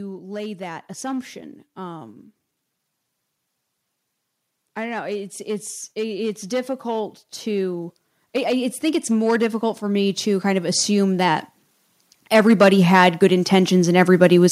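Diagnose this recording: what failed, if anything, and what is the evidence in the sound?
Hard clipping runs through the whole recording. The speech peaks are driven about 7 dB past what the converter or a fixed-point sample-format stage can pass, so their tops are cut flat. Only a small share of samples, around one or two percent, are affected, so it is heard as crackle and grit on the loudest syllables rather than constant fuzz. The abrupt, bright edge distinguishes it from the rounded compression of soft analogue saturation.

Automatic gain rising, in the call-processing stage, lifts the level three times: from 0.18 to 2.2 s by about 4 dB, from 4.75 to 11.43 s by about 12 dB, and from 12.16 to 14.47 s by about 6 dB. The gain control judged the input too quiet and raised it gradually. Speech and background noise swell together over seconds, which tells it apart from a talker moving closer, where the room noise would stay put.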